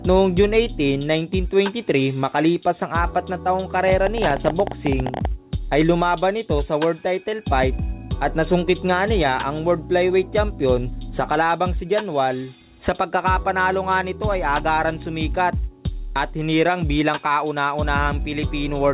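From 3.88 to 5.26 s, a train of clicks, about 20 unevenly spaced pops near 16 per second and roughly 10 dB above the sound. Likely interference or a faulty connection. They show as thin vertical spikes, and as broadband stripes that stop at the 4 kHz ceiling set by the call path.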